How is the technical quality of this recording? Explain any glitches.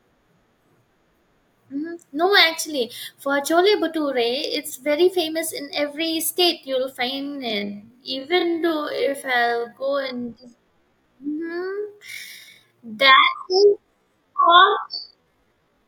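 The recording has one clear problem: a time-stretched section running from 7.06 s to the end at 15.88 s. There the speech abruptly slows to about half pace, 0.53 times normal speed, yet its pitch stays unchanged. That points to software likely stretching the audio by repeating short pieces, which makes it drag. A plain slowdown would lower the pitch along with the tempo.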